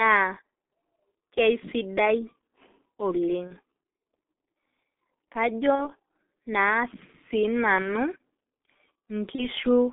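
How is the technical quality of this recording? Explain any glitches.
The technical quality is poor: the whole recording passes through a heavily compressed G.723.1 codec, and four brief dropouts are covered over by packet loss concealment.

G.723.1 codec, throughout: The speech is confined to roughly 250 Hz to 3.5 kHz. Its voice model is updated only every 30 ms, and the coarse coding fits the 6.3 kbit/s mode. The result sounds muffled and hoarse, with smeared consonants. On a spectrogram, energy stops sharply near 3.5 kHz, and harmonics look blocky and blurred from frame to frame.

VoIP packet loss concealed by the speech codec, at 3.47–3.53 s, 5.75–5.90 s, 7.82–7.95 s and 9.35–9.48 s: Each gap points to one missing 30 ms frame. The decoder filled it by repeating its last pitch and filter with falling gain. This stretches the sound into a buzzy tone or a coloured noise that fades. Because each frame depends on the previous one, the distortion persists beyond the gap. 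A spectrogram would show frozen, evenly spaced harmonics, and the waveform would show a decaying envelope.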